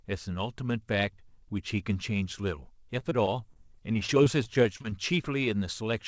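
Between 2.99 and 4.85 s, audio packets kept going missing, causing repeated packet loss (robotic sound). Each short hole, none longer than about 30 ms, was patched by stretching the preceding sound, so this span of speech turns choppy, with pieces missing and roughly a tenth of it concealed. Throughout, the sound stops at 8 kHz, which fits a wideband call codec such as G.722.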